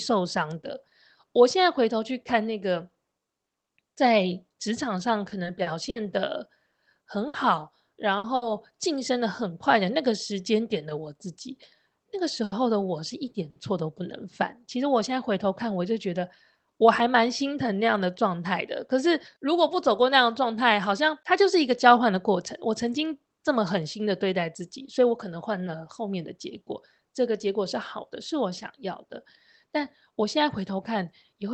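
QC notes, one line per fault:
5.29–5.99 s and 7.28–8.45 s: repeated packet loss (robotic sound). Packets went missing several times in quick succession, four holes in the first stretch and three in the second, none longer than 60 ms. Each hole is filled by extending the preceding sound (130 ms and 180 ms of fill), which gives the choppy texture. Where the fill runs out, 60 ms and then 180 ms of audio are simply gone.
12.44–12.55 s and 13.50–13.59 s: short stall from a late packet. Each time a packet arrived after its playout deadline, the jitter buffer ran dry. The receiver stretched the last sound for 80 ms and then 60 ms until the data caught up, and playback resumed from the same point. Nothing is lost. The result is a briefly held sound with a faint buzz, and each stall adds that much latency.
16.56–17.02 s and 30.12–31.33 s: jitter buffer speed-up. The buffer held more than its target. 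The receiver trimmed small pitch-period-sized pieces back to back, so playback runs about 7% fast at unchanged pitch and sounds slightly rushed. Roughly a few tens of milliseconds are cut in the first stretch and about a tenth of a second in the second. The band-limited Opus call path, with its 8 kHz audio bandwidth, runs throughout.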